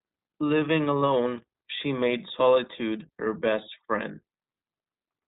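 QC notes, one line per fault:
Throughout, iLBC codec: speech is cut off above 3.8 kHz and sounds plainly rough and synthetic, fitting 20 ms frames coded independently at about 15 kbps. A spectrogram shows a hard ceiling at 3.8 kHz.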